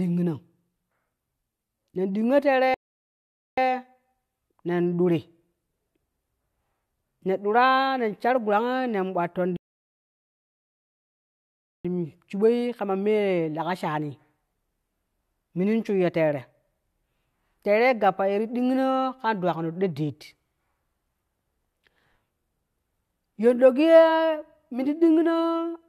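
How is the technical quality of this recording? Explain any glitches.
The recording is interrupted twice by rebuffering stalls, at 2.74–3.58 s (0.83 s) and 9.57–11.85 s (2.28 s). The player ran out of downloaded audio, fell silent, then resumed exactly where it stopped. On a waveform these are flat gaps; on a spectrogram, blank columns.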